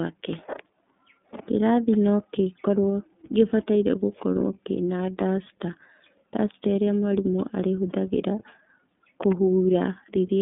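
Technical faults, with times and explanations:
throughout: iLBC codec. Speech is rough and plainly synthetic with nothing above 3.7 kHz, from independent frame-by-frame coding, which fits 30 ms frames at 13.33 kbps.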